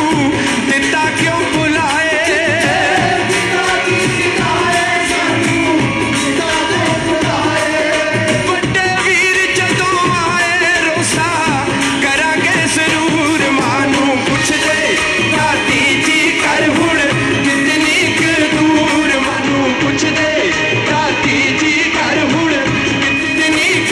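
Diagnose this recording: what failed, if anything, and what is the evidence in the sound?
Reception stage: digital radio blending to analogue FM, 19.19–23.4 s. A 305 ms cross-fade leaves a hiss floor roughly 35 dB down, and the level about 1 dB lower.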